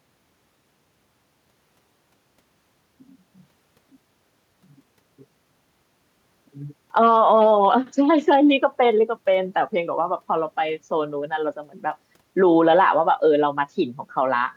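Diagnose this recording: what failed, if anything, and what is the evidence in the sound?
Nothing in the signal chain appears to have failed: the speech recording holds steady throughout, with no dropouts, clicks, distortion, level jumps or timing disturbances at any stage.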